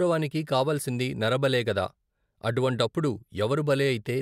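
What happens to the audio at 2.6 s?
Nothing goes wrong at 2.6 s; the speech carries on intact through that moment with no dropout, click or other fault.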